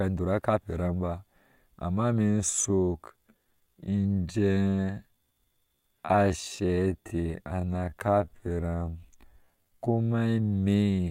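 After "kepe eram ubaa amma", from 2.22 s the speech drags at 0.58 speed, pitch unchanged: a time-stretched section, likely software repeating short pieces.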